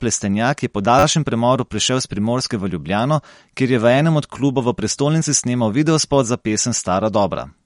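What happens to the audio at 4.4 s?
At 4.38 s, right after "je v enem od" and before "klubov v prestolnici snemal", a repeated buffer occurs. An 11 ms slice plays twice with a hard join, heard as a brief click. That fits a 512-sample buffer replayed when new audio arrived late. The sound is also dull and watery, with nothing above 11.2 kHz, likely from MP3 compression at a low bitrate.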